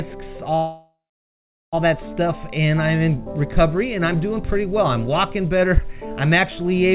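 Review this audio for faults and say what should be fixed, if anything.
A call audio freeze runs from 0.56 to 1.75 s. The last sound is stretched into a fading buzz that drops to silence for about 0.76 s, then the audio resumes where it stopped, so nothing is lost but about 1.17 s of extra delay is added. The likely cause is the jitter buffer running empty while packets were held up in transit. Through the G.711 mu-law path, the rest of the band-limited audio stops at 4 kHz. To prevent a repeat, fix whatever is holding up packets on the network, and give the jitter buffer enough headroom to ride out short delivery gaps.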